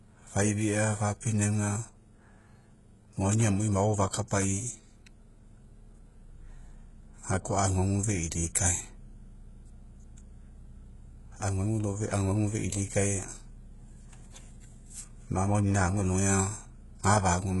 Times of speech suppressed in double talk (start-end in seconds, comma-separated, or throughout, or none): none